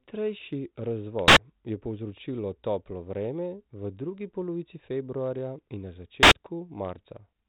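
A very loud pop followed by dead silence and another pop strikes at 1.28 to 1.37 s, and again at 6.23 to 6.32 s, through the band-limited, light G.726 telephone coding. Each is invalid numbers at full scale: an 85 ms block, which fits a 4096-sample block, went infinite or invalid and was pinned to one extreme value.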